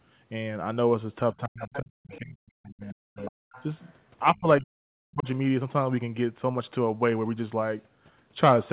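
From 1.32 to 3.33 s and again from 4.33 to 5.27 s, speech is suppressed in double talk. The voice dips as much as about 40 dB or cuts out in pieces only while another talker is active, unlike random network dropouts. At 1.6 to 1.79 s, 2.1 to 2.19 s, 3.17 to 3.31 s and 3.52 to 3.93 s, the other side's voice leaks through. It is a faint, separate voice at about 15 to 25 dB below the talker, likely loudspeaker echo the canceller missed, rather than a delayed copy of the talker.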